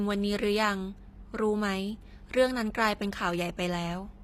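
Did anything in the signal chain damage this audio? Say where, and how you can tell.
Yes, at the codec stage throughout: s sounds turn gritty and metallic, with replicated, mismatched treble rather than cut treble, which points to likely HE-AAC compression at a low bitrate.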